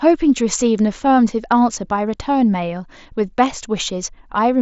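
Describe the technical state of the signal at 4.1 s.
At 4.1 s the audio is intact, with the speech passing through the Bluetooth mSBC headset link with nothing above about 7.7 kHz.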